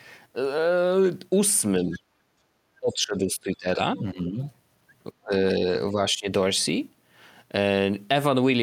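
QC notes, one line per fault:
1.85–2.01 s, 2.8–3.79 s, 3.96–4.4 s, 5.23–5.32 s, 5.91–6.27 s: speech suppressed in double talk. The echo canceller likely lost track of which sound was its own talker and which was loudspeaker echo while both sides spoke, so it turned everything down. The talker's speech dips by about 10 to 20 dB in each stretch. The longest and deepest stretch runs for about a second from 2.8 s.
1.96–2.0 s: other side's voice leaking through. A scrap of the far-end voice, played on the talker's loudspeaker, likely got past the echo canceller and into the microphone. It sits around 20 dB below the talker and lasts only about 40 ms. It comes inside the first suppression dip, so it sounds like a faint fragment of a second voice.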